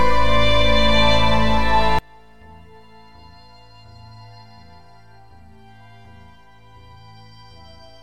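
A likely case of one channel inverted begins at 1.99 s and runs to the end: the music drops by about 30 dB, centred parts vanish, and only a faint residue remains, because reversed polarity cancels whatever both channels share.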